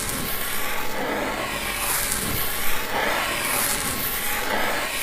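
The recording of everyday sounds shows no technical faults, with the signal intact and undisturbed throughout.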